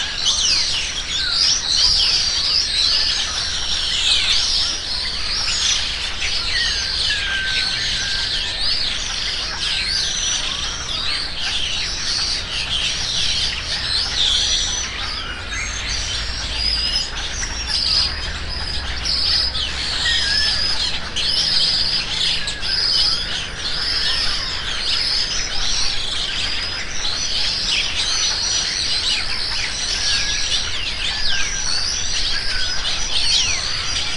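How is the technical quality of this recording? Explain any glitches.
The whole recording is off because of one fault, a wrong sample rate running from start to finish. Everything plays at about two-thirds speed and sits roughly 7 semitones low. Samples are read out slower than they were captured, with no conversion, so timing and pitch both drop by the same 0.667 ratio. That fits 48 kHz material played back at 32 kHz. The result is sluggish, dark and noticeably dragged out.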